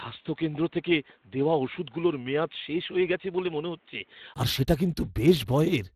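Speech clip, and from 0.0 to 4.36 s it sounds dull and boxy, with nothing above 3.8 kHz, a level about 5 dB lower and a faint noise floor roughly 40 dB down. Then a 20 ms gap and it opens up right before "আর সেটা". That's most likely an input switched to a poorer device, with the recording returning to the better mic there. On top of that, Speex codec damage is plainly audible throughout. It's hoarse and grainy, with nothing above 15.3 kHz, which fits a Speex mode around 22 kbps that's starving the excitation of bits.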